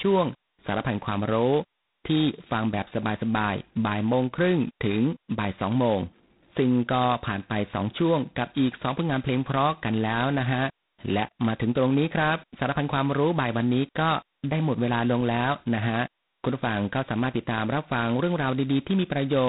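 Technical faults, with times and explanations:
Throughout, G.726 ADPCM: each sample is coded as a coarse difference from an adaptive prediction. The harsh, rasping hiss that rides on the speech and swells with its level fits the 16 kbit/s, two-bit mode. Nothing above 3.9 kHz survives.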